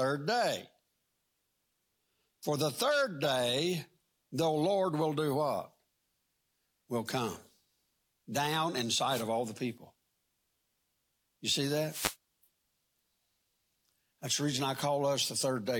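A speech recording with two wireless microphone noise hits, short swishes of static at 9.08 to 9.26 s, between "down in" and "all the people", and again at 11.88 to 12.16 s. Each is the FM radio link fading as reflections cancel, so receiver noise surges over the voice for a fraction of a second.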